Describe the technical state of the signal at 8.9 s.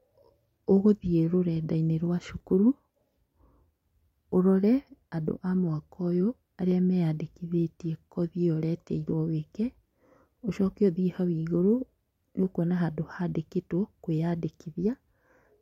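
At 8.9 s the signal is intact, with no audible technical fault at that moment.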